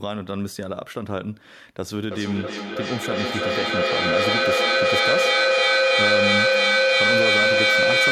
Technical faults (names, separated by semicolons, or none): feedback echo between two devices